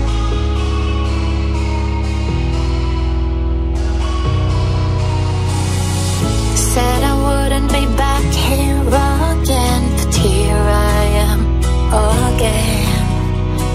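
No technical faults can be heard in this audio.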